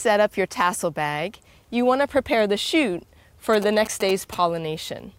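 From 3.53 to 4.35 s, GSM signalling bursts from a nearby phone, rectified in the audio circuit, gallop as clustered 217 Hz buzzes, not continuous hum.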